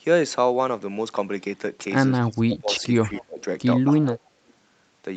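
Echo leak appears in this speech recording as three brief scraps at 2.22–2.26 s, 3.14–3.23 s and 4.48–4.53 s: a faint copy of the voice played on the far end's loudspeaker trailing by 244 ms. It is barely audible in the first and last instances and stronger, roughly 20 dB below the speech, in the middle one. The likely cause is a loudspeaker at the far end whose echo canceller let part of the returning sound slip back into the call. Speech suppressed in double talk shows up from 2.27 to 3.42 s, where the voice dips in pieces totalling around 0.7 s, at worst by roughly 20 dB, and again from 4.02 to 4.23 s with a shallower dip of about 15 dB. This is likely the echo canceller failing to tell the talker apart from overlapping loudspeaker sound, so it turned both down together.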